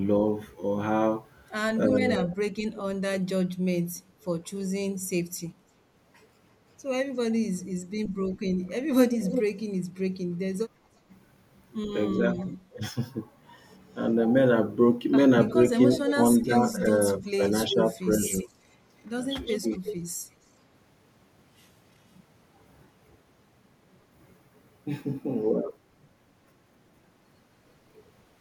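From 0.51 to 2.36 s there is an echo leak. A faint copy of the speech trails by 350 ms, about 25 dB below it. A loudspeaker echo likely slipped past the far side's echo canceller.

From 2.0 to 5.14 s, speech is suppressed in double talk. The speech dips in pieces, roughly a second in all, falling as much as about 40 dB. The canceller likely mistook talk over the echo for echo.

From 7.61 to 12.45 s the echo leak returns. The delay is 352 ms, and the echo is only about 5 dB under the speech. It sounds like a near-equal double. Inside it, from 8.62 to 8.69 s, a brief double-talk dip of about 20 dB cuts in.

From 10.7 to 10.92 s the background is gated by the echo canceller. Room sound drops by about 11 dB for around 200 ms, then returns. This happens while the canceller clamps the microphone.

From 12.17 to 18.51 s double-talk suppression recurs. Scattered drops of about 15 dB total roughly 0.7 s.

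From 15.5 to 19.96 s a third echo leak follows. It trails by 355 ms at about 10 dB down.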